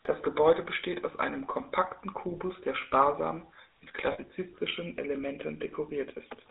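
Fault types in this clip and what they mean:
GSM full-rate codec: The whole clip has gone through the original GSM voice coder, which sounds like the 13 kbps full-rate version. It models the throat and mouth as a filter and drives it with a sparse train of regular pulses, so the speech comes out buzzy and gravelly. The damage is plainly audible. The band is squeezed to roughly 300 Hz to 3.7 kHz, so everything sounds thin and boxy, with no air on top.
Lost GSM frames: Around 4.12 to 4.19 s there's a short dropout of about 60 ms, which fits three 20 ms frames going missing. Instead of going silent, the decoder reuses the last good frame's settings and plays them again. That's why you get a brief rough, metallic ring rather than a clean gap. It's short enough that the sound never fades to silence before normal decoding picks up again.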